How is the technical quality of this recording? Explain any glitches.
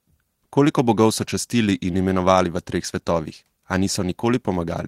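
No glitches or technical faults can be heard anywhere in the speech recording.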